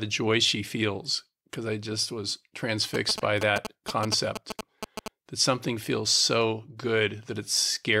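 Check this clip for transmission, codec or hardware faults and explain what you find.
One fault is present: GSM signalling bursts, from 2.94 s to 5.08 s. A 2G phone close to the equipment was exchanging short signalling bursts with its network. The audio circuit rectified that radio energy, turning it into audible pulses. The result is a galloping dit-dit-dit pattern of short buzzes pulsing at about 217 Hz. The bursts sit only a little below the main sound.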